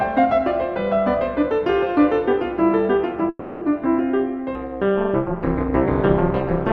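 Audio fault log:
3.29–3.63 s, call audio freeze: the music stalls and the last bit of sound hangs on as a fading buzz for about 320 ms, then picks up exactly where it left off. Nothing's lost; it's likely held-up packets draining the jitter buffer, leaving everything after it 320 ms late.
4.55 s to the end, overlap-add ripple: from here the level pumps up and down at around 200 Hz, with dips of about 60 dB, so the music gets a metallic buzz with extra tones around each note. The frames are being stitched back together with overlaps that don't sum to a steady gain.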